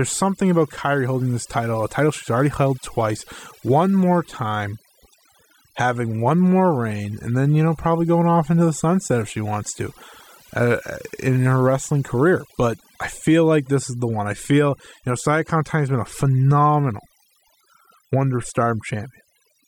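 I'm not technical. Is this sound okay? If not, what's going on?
No. Overdone noise removal, throughout: a noise cleanup set too strong also cuts quiet parts of the voice, leaving near-silence with twinkling specks.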